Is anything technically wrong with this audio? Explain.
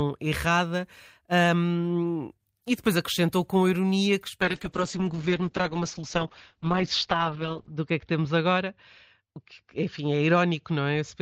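Yes. From 4.43 s, just after "acrescentou com ironia que", the speech turns rough and muffled to the end: a call bitrate drop from 48 to 8 kbps narrows the band from 20 kHz to 6 kHz.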